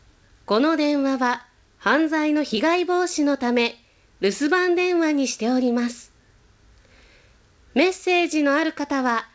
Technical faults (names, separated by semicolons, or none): none